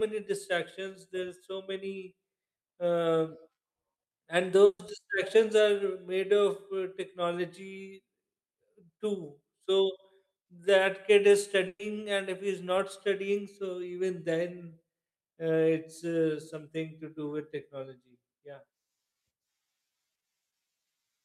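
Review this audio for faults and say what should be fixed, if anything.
At 4.65 to 4.81 s and again at 11.67 to 11.81 s, the speech briefly freezes into a held, fading sound, drops to silence for about 50 ms and 40 ms, then resumes slightly further on. Each is a burst of packet loss: about 140 ms and 120 ms of audio was lost or came too late to play, so the receiver stretched and faded the last sound to cover the gap, and that stretch of speech is missing. Prevent it with forward error correction or redundant packets and a deeper jitter buffer.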